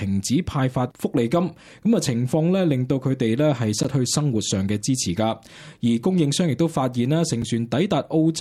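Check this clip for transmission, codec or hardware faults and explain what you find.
Two dropouts, both blocks of digital silence. At 3.83 s and 7.42 s the audio path put zeros in place of real samples, for 13 ms and 4 ms. The sound cuts out and back with no fade, heard as short ticks.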